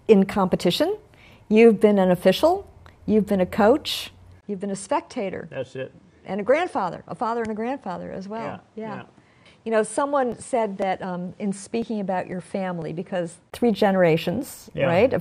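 The recording input was likely switched to a poorer device at 4.41 s, after a short gap of about 20 ms. From there until 13.52 s the sound is duller and narrower, with nothing above 10.5 kHz, roughly 10 dB quieter, and carrying a new background noise well below the signal. Within that stretch, periodic USB or driver dropouts occur: from 10.32 s to 13.32 s, something stalls the audio path every 0.5 s and roughly a millisecond of audio is skipped each time, producing about seven evenly spaced ticks heard over the signal.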